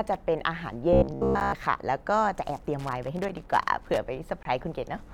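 Speech with three kinds of fault. Gaps between stream segments occur at 0.40 s, 1.40 s and 4.43–4.45 s, adding about 5, 9 and 23 ms of silence at one-second segment joins; each appears as a hard-edged flat line in the waveform and a clean vertical blank in the spectrogram. From 0.93 to 1.52 s a robotic sound, likely from repeated short buffers, replaces most of the real audio with a rigid 66.7 Hz buzz, visible as evenly spaced harmonic stripes every 66.7 Hz. Loose connector crackle from 2.79 to 3.99 s produces irregular scratchy bursts, seen as scattered broadband vertical spikes and chopped stretches of waveform.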